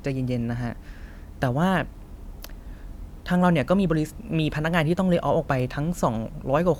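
Nothing stood out as a technical fault on listening to this speech recording.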